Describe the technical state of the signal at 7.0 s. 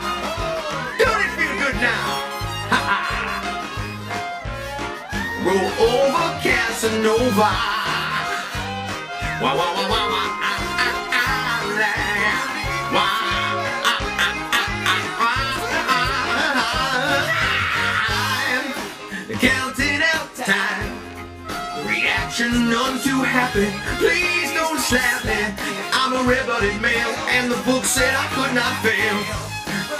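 At 7.0 s the signal carries channel delay (comb filtering), present throughout the clip. One channel lags the other by roughly 20 ms before the two sum to mono. Shared content cancels at evenly spaced frequencies, starting near 30 Hz. The sound is rough or slightly doubled.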